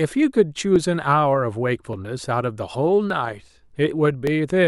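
From 0.76 to 4.27 s, clicks recur every 1.17 s. These are likely clock drift buffer slips, with mismatched device clocks dropping or repeating a few dozen samples each time.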